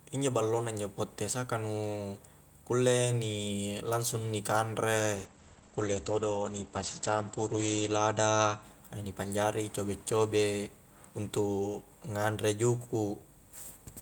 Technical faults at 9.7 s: none

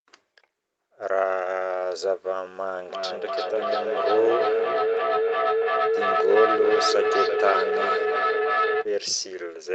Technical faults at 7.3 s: feedback howl

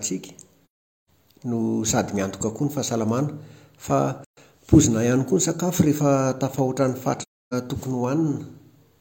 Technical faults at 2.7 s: none

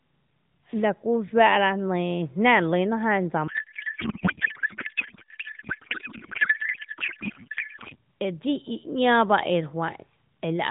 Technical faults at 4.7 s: codec payload misread

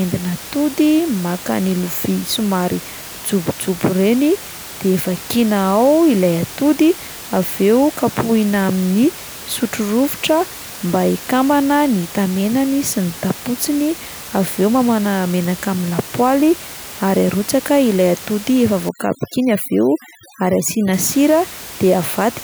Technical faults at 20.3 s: overdone noise removal

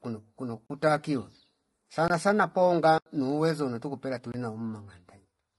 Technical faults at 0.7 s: low-delay AAC compression; block of digital silence

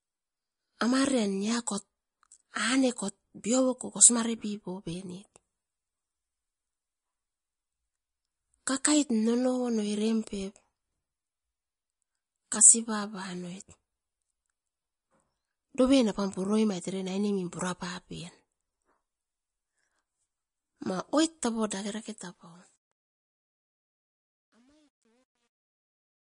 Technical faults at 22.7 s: MP3 compression; truncation distortion on a fade

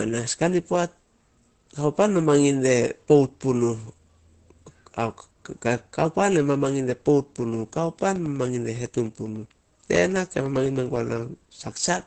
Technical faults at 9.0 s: Opus compression; periodic USB or driver dropouts

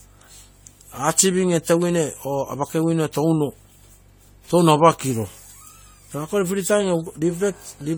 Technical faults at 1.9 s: generation loss

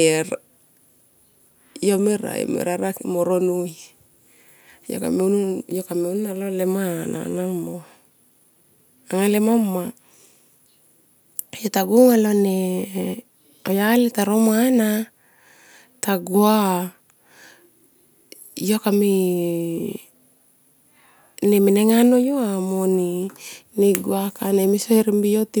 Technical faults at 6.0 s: none

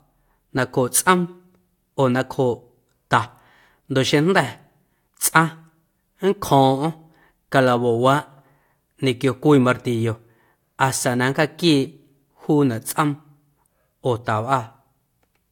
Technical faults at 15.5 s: none

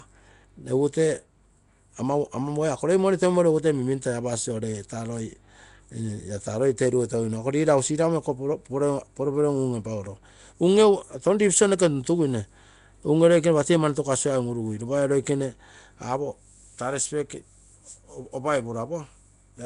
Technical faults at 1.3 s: Nellymoser compression

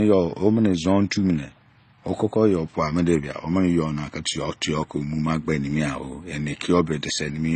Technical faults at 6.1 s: transcoding between lossy codecs

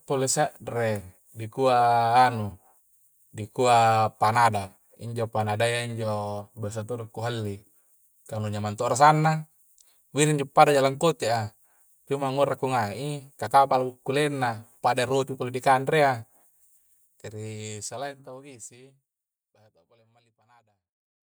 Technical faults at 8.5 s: none

